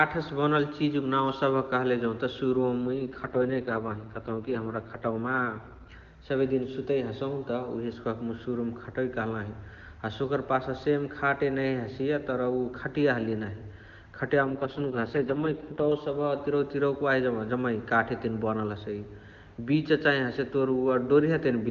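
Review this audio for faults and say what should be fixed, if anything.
AMR rate drops at 2.82–5.93 s and 14.43–15.91 s: the speech turns rough and synthetic, fitting a fall from the 23.85 kbit/s wideband mode to about 6.6 kbit/s. The band stays intact and nothing cuts out, because the link spent its bits on error protection. To prevent it, strengthen the radio link or hand over to a better cell.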